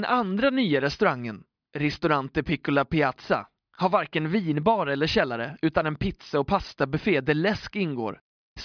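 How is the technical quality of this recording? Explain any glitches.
No glitches or technical faults are audible anywhere in the speech recording.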